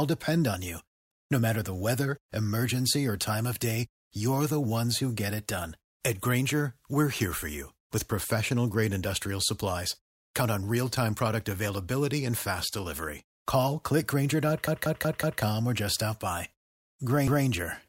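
A repeated buffer stutter occurs at 1.12 to 1.3 s, right after "depend on you", and again at 14.68 to 15.42 s, just before "or just stop by". Fresh audio failed to reach the output in time, so the last block of about 0.19 s, which fits an 8192-sample buffer, was played again. The first event repeats once, the second four times, each with a hard join. The sound then resumes without any audible gap.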